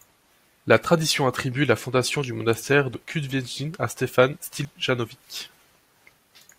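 At 2.94 s, right after "la fondation du monastère", the speech lurches forward, dropping about a tenth of a second. The same jump recurs at 4.65 s. These are compressed frames skipped. The skip length fits a single compressed frame of 85.3 ms that was missing or rejected by the decoder.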